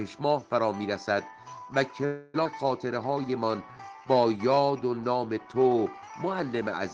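At 2.05 s the sound stalls until 2.36 s. A call audio freeze stretches the last sound into a fading buzz for 285 ms. Packets were likely held up in transit.

From 2.44 to 2.47 s comes a skip ahead. About a fifth of a second is dropped. Playback jumps forward, and the two sides butt together with barely a gap.

From 2.88 to 4.78 s there is a jitter buffer slow-down. Repeated pitch periods add 220 ms. The sound plays at 89% speed with unchanged pitch and seems drawn out.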